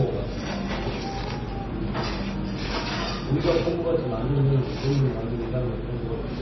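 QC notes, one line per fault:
Throughout: MP3 compression. Nothing is heard above 5.9 kHz, so the top end is cut off sharply and the sound is dull. Weak detail flickers on and off between frames, giving a heavy watery, swirling texture. This likely comes from starved MP3 encoding near 24 kbps.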